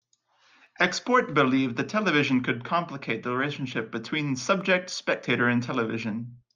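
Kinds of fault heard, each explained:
Dropped samples: Two single sharp clicks cut through the speech, one at about 0.67 s and another at about 4.61 s, each appearing as a thin vertical line across the spectrum with no sound audibly missing around it. The likely cause is a handful of samples, a tiny fraction of a millisecond's worth, going missing from the stream, so the waveform leaps straight from one value to a later one and that abrupt step is heard as the click.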